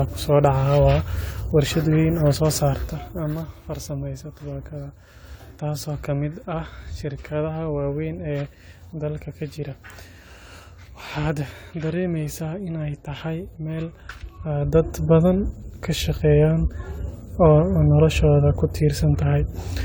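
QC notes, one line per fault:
Throughout: generation loss. The speech sounds swirly, smeared and hollow, with blurred consonant attacks, more than one encode at this quality would explain. The likely cause is around four successive AAC-LC passes near 96 kbit/s, each requantising on a shifted frame grid, so noise and spectral holes accumulate.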